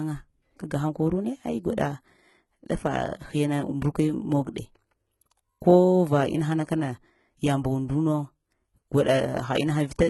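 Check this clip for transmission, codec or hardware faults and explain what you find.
There's one codec fault, and it runs the whole length of the speech.

Throughout, it sounds like HE-AAC compression, likely at a very low bitrate around 16 kbps. The upper band is rebuilt from copied lower bands, so harmonics don't line up and the s sounds come out gritty and metallic. The damage is heavy, and nothing survives above 11.8 kHz.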